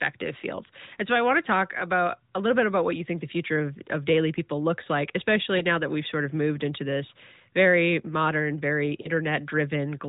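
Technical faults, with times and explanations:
5.58–5.63 s and 9.02–9.08 s, lost AMR speech frames: each is a single dropout of about 20 ms, which fits one missing 20 ms frame of the narrowband AMR stream. With no valid frame to decode, the decoder repeats the last good pitch and vocal tract settings at reduced gain, so each spot is a brief dip or warble. A lost frame this isolated recovers almost at once, with the voice sounding momentarily weak or rough.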